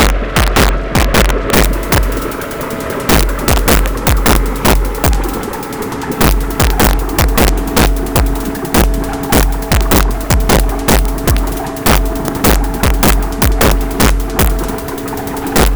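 The sound is hit by integer overflow throughout. It runs about 6 dB too hot, so its loudest peaks exceed the integer range. Instead of clipping, they wrap to the opposite sign. A few percent of samples flip this way, giving violent, harsh cracks on loud moments.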